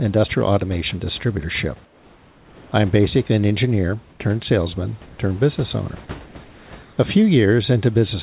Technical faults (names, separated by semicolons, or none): comfort noise in place of the background